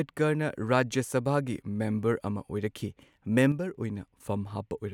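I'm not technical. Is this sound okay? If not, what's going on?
No. From 3.52 to 3.75 s the speech suddenly drops in volume, likely because one channel drops out briefly.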